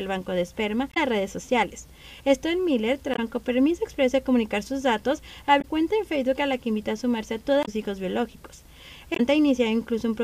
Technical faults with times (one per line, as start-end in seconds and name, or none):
0.90-0.97 damaged data in a compressed stream
3.12-3.19 damaged data in a compressed stream
5.58-5.65 damaged data in a compressed stream
7.62-7.69 damaged data in a compressed stream
9.13-9.20 damaged data in a compressed stream